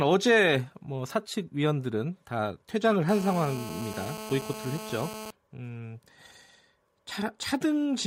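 From 3.09 to 5.31 s, GSM phone buzz enters the speech: a nearby 2G phone on a call transmits bursts 217 times a second, and the circuit rectifies them into a steady buzz about 12 dB down. Its harsh, harmonic-rich 217 Hz rasp distinguishes it from smoother mains hum.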